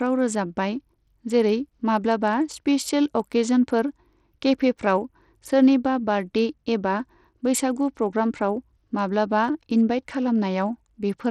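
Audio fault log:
Throughout: Bluetooth SBC compression, likely, with plainly audible damage to the speech. The treble thins and flickers in and out, and a gritty, grainy noise rides on the sound, which fits a starved bit pool near 80 kbps leaving the weak upper sub-bands with few or no bits and coarsely quantising the rest. On a spectrogram, the top band shows patchy, blinking energy with a ragged upper edge and speckled noise between harmonics; the waveform looks ordinary.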